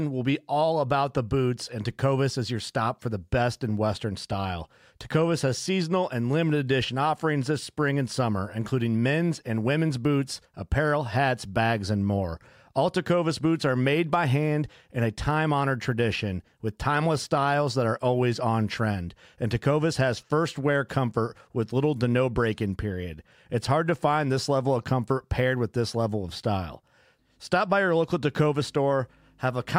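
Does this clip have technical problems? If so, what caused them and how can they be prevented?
No, no technical faults are audible.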